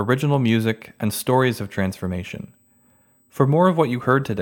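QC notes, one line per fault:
Throughout, USB whine: a faint fixed 8 kHz tone, strongest at 16 kHz, well below the speech, from the bus's 125 µs microframe current leaking through power or ground.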